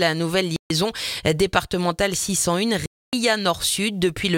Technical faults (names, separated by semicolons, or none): Bluetooth stall